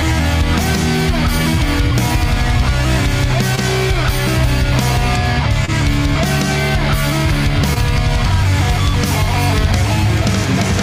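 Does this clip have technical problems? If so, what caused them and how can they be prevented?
Yes. Short concealed packet loss at 3.55–3.59, 5.65–5.70 and 7.74–7.78 s: about 20 ms arrived too late each time, so the receiver extrapolated the preceding sound, leaving brief smears. Prevent it with a larger jitter buffer, forward error correction, and a less congested network path.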